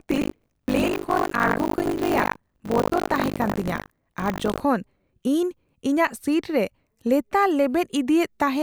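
From 0.00 to 4.62 s the speech carries buffer tearing: writer and reader have slipped within a ring buffer, so each 20 ms period splices in roughly a third of audio about 70 ms old, producing a robotic 50 Hz rattle present only while sound plays.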